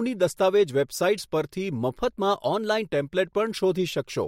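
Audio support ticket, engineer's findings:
Drift correction step, 1.98–2.85 s: speech jumps about 5.4% faster and roughly a semitone sharper (91 cents), then returns. Likely clock-sync resampler stepping rate to rebalance buffer. Spectrogram: harmonic stack shifts upward as a block; waveform periods visibly compressed.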